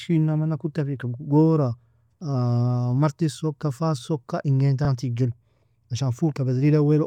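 A speech clip with one case of repeated frames, at 4.85 to 4.88 s. A 32 ms chunk of audio plays, then plays again immediately, which gives that quick stutter where the sound seems to catch on itself for an instant. A block that size fits a single compressed frame being written or sent twice, so the decoder simply ran it a second time, and the clip ends up 32 ms longer than it should be.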